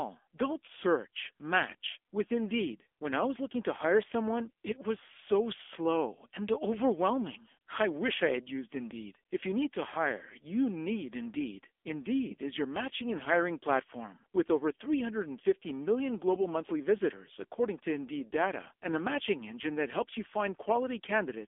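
Speech passed through an AMR narrowband mobile codec at a low rate, consistent with AMR-NB near 6.7 kbps, so the audio is band-limited to about 300 Hz to 3.5 kHz, nothing above 3.6 kHz, with heavy buzzy, synthetic coding damage throughout.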